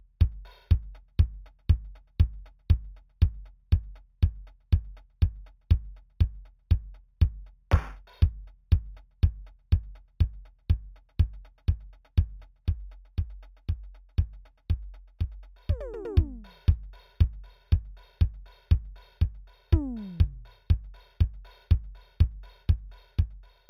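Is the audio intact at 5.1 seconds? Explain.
No. At 5.1 seconds the music carries imaging from linear upsampling, present for the whole clip. The dull top points to an 8 kHz rate raised to 48 kHz by straight-line interpolation. Faint mirror images sit from 4 to 8 kHz, roughly 40 dB down, adding a thin metallic shimmer.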